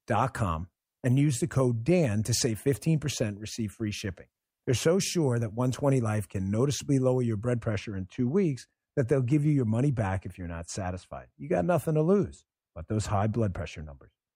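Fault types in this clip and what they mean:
De-emphasis applied wrongly: a treble roll-off meant to reverse pre-emphasis landed on speech that never had any boost, or was applied twice, so from about 7.6 s to the end the top end slopes away smoothly, down about 8 dB at 10 kHz against 1 kHz, and everything turns dull and muffled.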